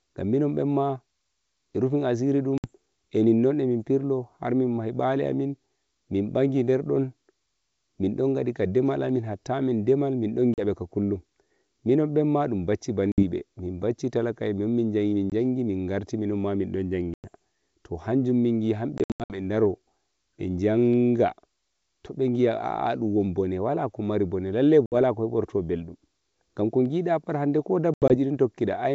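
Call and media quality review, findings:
Packet loss on the ADPCM call at 2.58 s (60 ms hole, just before "eninnon eh mim pirlo"), 10.54 s (40 ms), 13.12 s (60 ms), 15.30 s (20 ms), 17.14 s (100 ms), 18.98–19.38 s (220 ms lost in bursts, longest 80 ms), 24.86 s (60 ms) and 27.94–28.14 s (100 ms, longest 80 ms). Hard-edged silent gaps, each about 20 ms per packet. G.722 decoder state drifts from the sender's, so audio resumes slightly distorted, settling within tens of ms.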